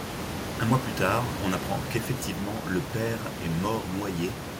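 No technical faults can be heard in the speech; the signal stays intact throughout, with only the room's own background noise sitting about 8 dB below the voice as part of the recording.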